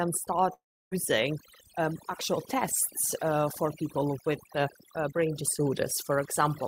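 A speech recording in which, throughout, the background is pushed down and sprinkled with twinkling specks. This is overdone noise removal: a reduction stage set too aggressively shuts off individual frequency bands near its noise estimate, taking the quieter parts of the voice along with the hiss. From 0.53 to 0.93 s the audio breaks off into a brief fading buzz or hiss and then roughly 0.3 s of silence before resuming, with about 0.38 s of the speech never heard. This points to a long network dropout, likely caused by packets failing to arrive, with the receiver stretching the last sound until it gave out.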